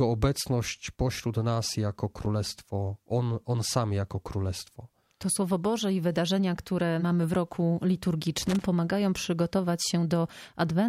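At 2.19 to 2.26 s a short burst of loose connector crackle breaks into the sound, and it returns for longer from 8.41 to 8.64 s. A worn or dirty contact in the signal path is making and breaking many times in quick succession, so the audio is chopped and any DC on the line turns into pops. It sounds like irregular scratching. On a waveform it shows as jagged dropouts and spikes. A spectrogram shows broadband vertical streaks over both spans.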